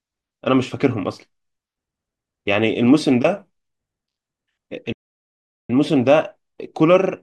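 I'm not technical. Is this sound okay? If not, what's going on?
No. At 4.92 seconds the speech cuts out completely for about 0.77 seconds, then picks up again at 5.70 s. This is a playback stall: the player most likely ran short of data and went silent until it caught up.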